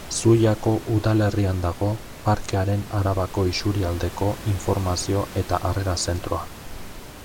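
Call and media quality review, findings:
Nothing stood out on listening to this speech clip; the room noise sits about 16 dB below the speech and belongs to the recording itself.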